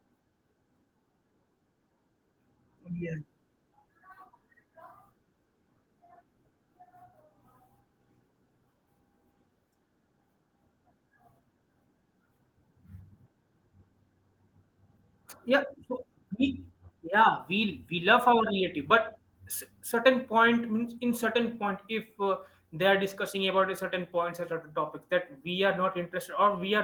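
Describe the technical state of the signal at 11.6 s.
At 11.6 s the speech is intact, with no fault, and the Opus voice compression running through it leaves only light coding damage there.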